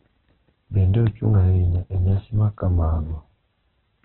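Throughout, the speech sounds rough and grainy with nothing above 4.1 kHz, likely heavy Opus compression at about 8 kbps; a spectrogram shows a hard ceiling there.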